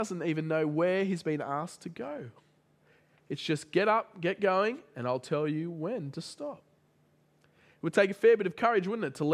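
No technical faults are audible.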